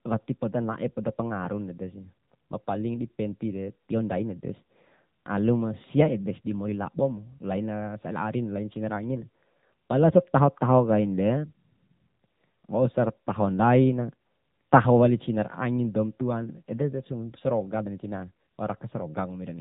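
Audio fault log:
Throughout, AMR narrowband mobile codec: the speech has been squeezed through the AMR-NB phone codec, and the damage is plainly audible. The voice sounds buzzy and synthetic, with a thin, boxy tone, which fits one of the lower modes around 7.95 kbps, where each 20 ms frame rebuilds the voice from a vocal-tract model and a few pulses. On a spectrogram, everything stops at a flat ceiling near 3.8 kHz, with blurred harmonics beneath.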